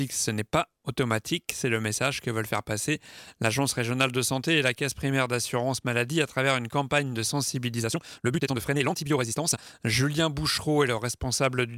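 A time-stretched section runs from 7.75 to 9.75 s, likely from software squeezing the audio to 1.88 times speed by dropping short pieces, sounding rushed at unchanged pitch.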